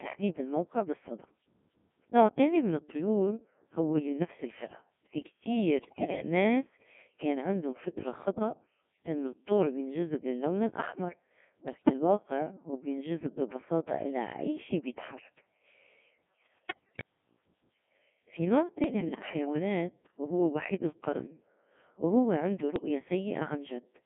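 Speech, heard through a Codec 2 vocoder for the whole clip. The voice is rebuilt from sine waves, not from the original waveform. It sounds robotic and buzzy. The codec damage is heavy, and the band runs only from 150 Hz to 3.4 kHz. The coarse, clipped detail fits the 1.6 kbit/s mode. There are also five bursts of bit errors on digital voice radio: 5.81 to 6.22 s, 11.68 to 11.93 s, 16.56 to 17.04 s, 18.84 to 19.33 s, and 22.76 to 22.88 s. In each burst the voice jumps in pitch, level and tone colour and breaks into warbles and bleeps. Each corrupted bit steers a whole frame's pitch, energy, voicing or envelope. The burst lengths point to about two to twelve frames hit. The error rate is heavy, around one bit in ten, and worst in the first burst.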